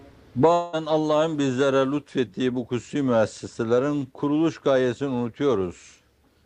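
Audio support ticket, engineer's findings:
Long network dropout, 0.53 to 0.75 s. Roughly 0.2 s of audio lost, almost all of it masked by a smeared buzz that decays rather than cutting to silence. Likely cause: packets not arriving at the receiver, with concealment stretching the last good frame. Waveform shows a tapering envelope with no true flatline. Spectrogram shows frozen, blurred harmonics fading out, then an abrupt resumption with the lost material absent.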